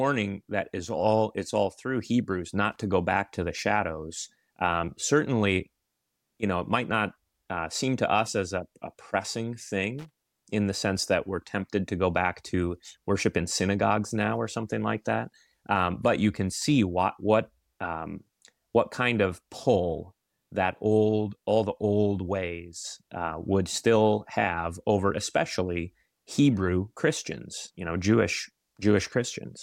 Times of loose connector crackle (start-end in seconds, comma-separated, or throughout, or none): 2.72-2.80, 9.98-10.16